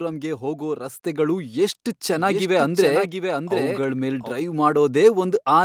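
At 1.02 s the microphone volume stepped up. The level jumps by about 6 dB at once. Speech and background rise together, as automatic input gain would cause.

From 2.13 s to 4.31 s there is a doubled audio track. A second full-band copy trails roughly 0.7 s behind, somewhat quieter. It starts and stops abruptly, with no room colour, likely from a slower second capture path.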